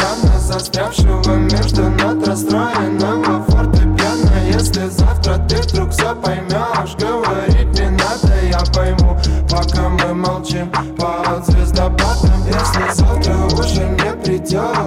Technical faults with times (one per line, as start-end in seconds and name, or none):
none